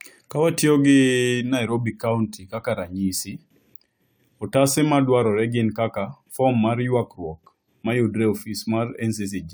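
No technical faults can be heard anywhere in this recording.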